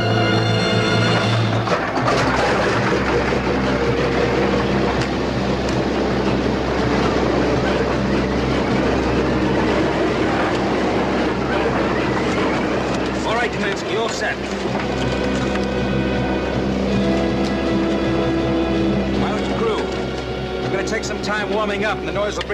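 Nothing in this audio stands out as a technical fault; it just runs along without any glitch worth pointing to.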